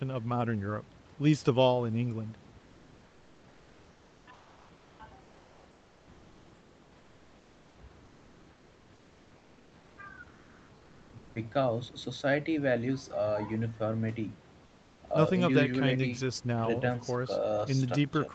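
From 2.59 to 4.99 s, 5.23 to 7.75 s, 8.05 to 9.97 s, and briefly 14.65 to 15.01 s, the room background in the speech pauses gets swapped for comfort noise: a smooth, featureless hiss that's about 2 dB quieter than the real background, and about 4 dB quieter in that last short gap. The likely cause is Opus DTX: the sender goes quiet when nobody's talking, and the receiver fills the gap with synthetic noise until speech returns.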